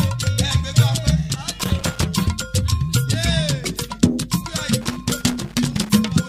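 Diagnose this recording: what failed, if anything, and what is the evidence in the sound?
Loose connector crackle in the analogue wiring: irregular scratchy bursts from 1.59 to 2.03 s and again from 4.81 to 5.90 s. A worn contact keeps making and breaking, chopping the signal. A spectrogram shows scattered broadband vertical streaks, and the waveform shows ragged dropouts and spikes.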